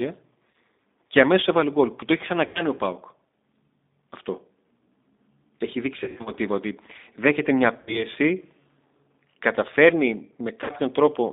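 Throughout, the speech carries G.729 coding: a rough, slightly synthetic quality consistent with an 8 kbit/s codec rebuilding each frame from a filter, a pitch predictor and a few pulses, on a line band of roughly 250 Hz to 3.7 kHz.

VoIP packet loss concealed by the speech codec hits at 0.51 s (about 30 ms), 2.46 to 2.65 s after "γκολ που το έχει" (90 ms), 6.04 to 6.33 s before "ότι δέχεται μια" (160 ms scattered over 220 ms, longest run 90 ms), 7.81 to 8.06 s after "ότι δέχεται μια" (60 ms) and 10.64 to 10.72 s (50 ms). At each, the decoder extends the last pitch and filter into a fading buzz or coloured noise, leaving the following audio briefly weak.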